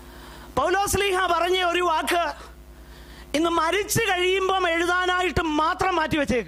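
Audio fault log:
Throughout: mains hum, a steady 60 Hz tone with some low harmonics roughly 25 dB under the signal; fixed pitch and level set it apart from rumble.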